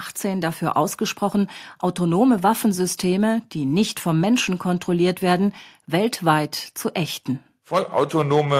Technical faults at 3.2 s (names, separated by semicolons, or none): none